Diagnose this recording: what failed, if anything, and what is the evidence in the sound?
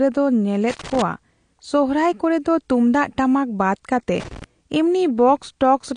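Throughout the speech, the sound is dull and smeared, with plainly audible codec damage and nothing above 9.8 kHz. The likely cause is AAC compression at the codec stage, probably AAC-LC at a low bitrate around 32 kbps. The encoder drops the upper band and coarsely quantises what remains.

Loose connector crackle, an analogue wiring fault, appears as irregular bursts of crackle and scratching from 0.70 to 1.02 s, and again from 4.20 to 4.44 s just after "ᱛᱩᱢᱫᱟᱜ ᱴᱟᱢᱟᱠ ᱵᱟᱫ ᱠᱟᱛᱮ". A worn or dirty contact repeatedly makes and breaks, chopping the signal in short fragments.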